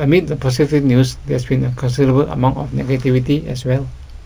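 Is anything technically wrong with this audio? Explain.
Yes. Imaging from linear upsampling, throughout: straight-line interpolation from what sounds like a 16 kHz source dulls the highs and leaves faint 8 to 16 kHz images, adding metallic shimmer to sibilants.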